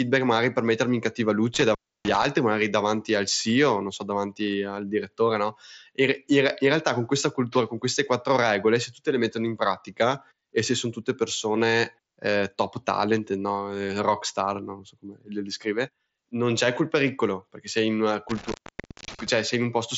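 A speech recording with two dropouts: around 1.54 to 2.26 s and again around 18.29 to 19.29 s, the sound crackles, cuts out briefly, and crackles back in, leaving faint hiss in the gap. These are intermittent contact faults, where a loose cable or plug momentarily breaks the connection, with the line open for about 0.3 s and about 0.56 s respectively. The audio throughout stops near 7.7 kHz, consistent with an mSBC Bluetooth headset link.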